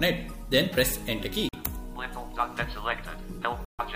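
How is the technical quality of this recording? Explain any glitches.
Two brief gaps spoil the recording. Bluetooth dropouts, likely, occur at 1.49 to 1.55 s and 3.65 to 3.80 s: audio packets missed their deadline to the headphones and were discarded, fitting roughly two and six lost frames. Each hole falls silent, then sound resumes as though it had kept playing.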